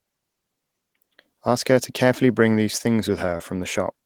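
At 3.37 to 3.42 s there is a short concealed packet loss. About 20 ms of the speech never arrived in time. The receiver filled the gap by extending the preceding sound for 22 ms, then blended back. It comes across as a brief smear.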